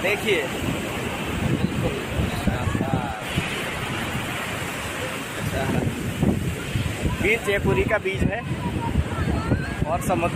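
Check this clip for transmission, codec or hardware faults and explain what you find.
One transmission fault is present: a call bitrate drop from 2.29 s to 4.35 s. The audio turns rough and watery, with the top end dulled, for roughly 2 s, then clears as the rate recovers. The connection's bandwidth estimate fell, so the encoder was forced to spend far fewer bits, coding the signal more coarsely and discarding high frequencies. The degree of degradation fits a fall from about 64 kbps to 16 kbps.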